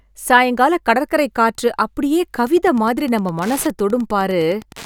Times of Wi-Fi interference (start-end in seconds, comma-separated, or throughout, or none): 2.43-4.86